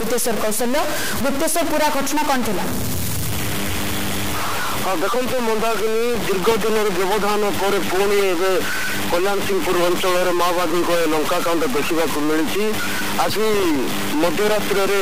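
A distortion runs through the whole clip. It rides on the signal and fills the quiet gaps with a gritty noise floor. The likely cause is a stuck bit, one data bit frozen by a broken line or converter.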